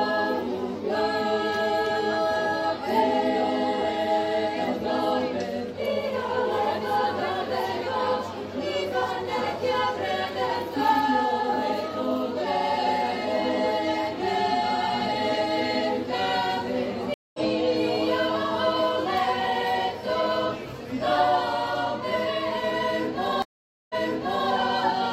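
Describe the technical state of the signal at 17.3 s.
At 17.3 s you're inside a stream reconnect that runs from 17.14 to 17.39 s. The connection dropped, the player went quiet for about 200 ms, then reconnected and spun up a fresh decoder mid-stream. Because it's picking up a live feed rather than where it left off, the sound comes back roughly 150 ms further along, so there's a clean gap followed by a small jump forward, with a bit of the material simply missing.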